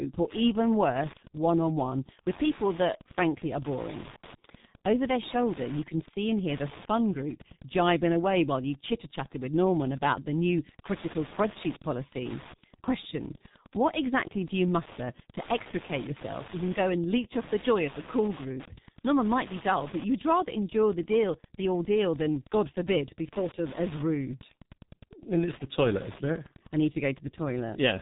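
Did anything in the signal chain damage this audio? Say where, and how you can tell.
Yes. There is Wi-Fi interference in the analogue wiring. A steady tick runs through the whole clip at about ten per second, a 102.4 ms spacing that matches a Wi-Fi beacon. It sits about 20 dB below the speech. A nearby radio is being rectified by the circuit.

The codec stage did heavy damage. This is the G.723.1 codec. Nothing is heard above 3.8 kHz. The speech is muffled and hoarse throughout, with smeared consonants. That fits a rate near 6 kbit/s. The coarse frames and slow voice model lose detail.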